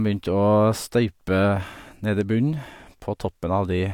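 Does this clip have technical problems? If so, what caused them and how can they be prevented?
No, there are no technical problems to report here.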